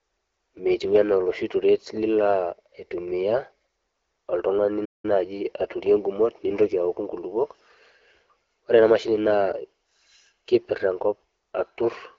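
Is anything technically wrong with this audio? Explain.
Yes. There is a playback stall from 4.85 to 5.05 s. The speech cuts off mid-flow into about 0.19 s of silence, then resumes. The likely cause is the player running short of buffered data, or its thread being blocked, so output halts until it recovers. The speech is carried through the AMR wideband (HD Voice) codec at 12.65 kbit/s, with nothing above 7 kHz.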